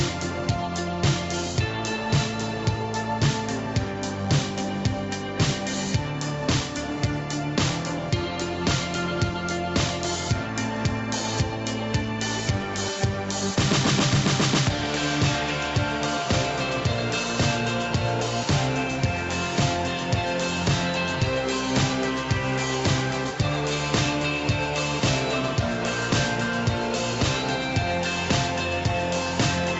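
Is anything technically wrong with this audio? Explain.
No, nothing technically wrong stood out on listening to this audio.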